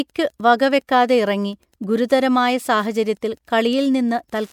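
Wi-Fi interference runs under the speech throughout: a nearby radio's beacon, rectified by the audio circuit, ticks every 102.4 ms, roughly 40 dB below the speech.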